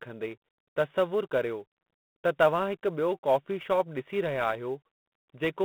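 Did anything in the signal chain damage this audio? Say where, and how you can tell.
Yes, at two stages. The first is the codec. The speech is confined to a telephone band of about 150 Hz to 3.5 kHz, with nothing at all above 3.9 kHz, and a harsh, rasping hiss rides on every syllable and rises and falls with the speech level. That is plainly G.726 ADPCM damage. Coding only a few bits of difference per sample from an adaptive predictor leaves this much quantisation noise, which fits the 24 kbit/s mode.

The second fault is at the converter: sample clock jitter. Beneath the codec hiss is a finer, grainy roughness that grows on loud passages and on sibilants and other fast-changing sounds, and disappears in the pauses. An unstable sampling clock takes each sample slightly early or late. The error is largest where the waveform is steepest. The roughness sits at roughly 35 dB below the speech, which fits timing wander on the order of a few microseconds.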